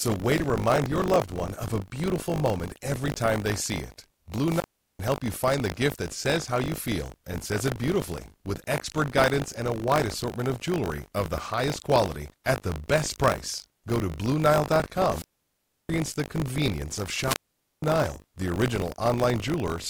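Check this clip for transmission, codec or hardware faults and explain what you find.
Two faults are present: a steady buffer tearing buzz and three wireless microphone squelch dropouts.

Buffer tearing runs through the whole clip. A robotic 50 Hz rattle rides on the speech and stops in pauses. The writing program and the playback hardware have drifted, so each 20 ms period splices in a small slice of audio about 40 ms stale, with hard joins on both sides.

Wireless microphone squelch dropouts occur at 4.45 to 4.99 s, between "they see it" and "help you find the", muting for about 0.39 s; at 15.10 to 15.89 s, just before "the convenience of", muting for about 0.68 s; and at 17.22 to 17.83 s, right after "the convenience of", muting for about 0.49 s. Each one is a brief swell of hiss, then near silence, then the speech returns. The radio signal faded far enough that the receiver's squelch cut the output.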